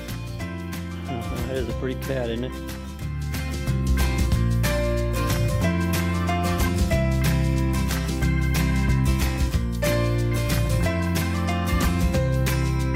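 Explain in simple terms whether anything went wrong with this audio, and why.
Nothing went wrong that I could hear; listening closely, nothing in this audio stood out as a problem.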